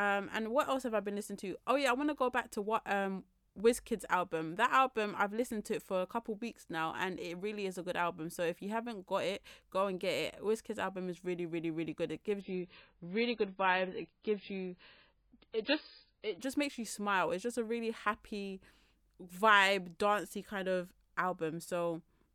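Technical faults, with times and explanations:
12.41–16.41 s: adaptive stream at a lower bitrate. The speech abruptly loses everything above 5 kHz and turns swirly and coarse. The connection dipped, so playback switched to a much leaner MP3 encoding, which fits roughly 16 kbit/s instead of 128, then recovered before "just makes you smile".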